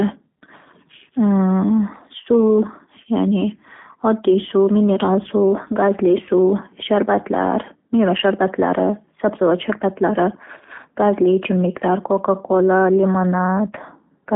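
Speech throughout sounds thin, rough and faintly synthetic, with nothing above about 3.6 kHz, consistent with the G.729 codec, likely at 8 kbit/s, on a 200 Hz to 3.5 kHz line.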